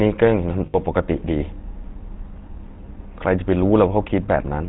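Throughout, the speech has a buzzy, gravelly roughness, and nothing comes through above 4 kHz. This is plainly audible GSM full-rate codec damage, which fits a 13 kbps GSM full-rate stream. The codec models the vocal tract as a filter and drives it with an excitation made of regularly spaced pulses, keeping only every third excitation sample. That coarse excitation produces the grainy buzz, and the narrow band removes all of the upper spectrum.

From 0.66 to 0.77 s the sound freezes into a rough, metallic ring. Lost GSM frames cause this, and the gap fits four dropped 20 ms frames. For each bad frame the decoder reused the parameters of the last good one. That repeated sound gives the held, ringing timbre until good frames arrive again.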